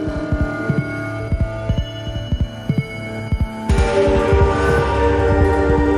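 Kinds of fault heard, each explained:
Channel delay (doubling): one channel lags by about 85.3 ms, which fits a 4096-sample buffer. Summing to mono then plays every sound twice at equal level, a slap echo throughout. Waveform and spectrogram show each onset duplicated 85 ms later.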